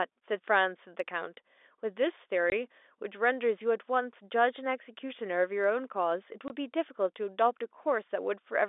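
Speech carried over a G.711 telephone line, band-limited to roughly 300 Hz to 3.6 kHz, shows packet loss filled with silence: two 20 ms dropouts at 2.50–2.52 s and 6.48–6.50 s. Each hard-edged hole fits a single lost packet replaced by silence.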